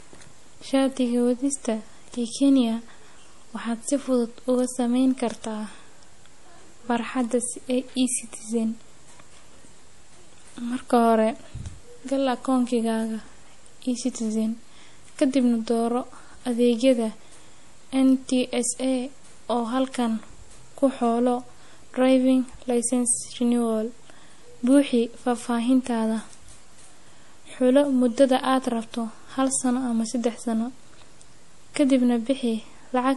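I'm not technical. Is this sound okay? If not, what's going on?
No, not quite. Throughout the speech nothing comes through above about 11.5 kHz, so it sounds dull. That's likely a case of low-bitrate audio saved at a high bitrate: a small, squeezed file re-saved as a bigger one, which can't bring back what was lost.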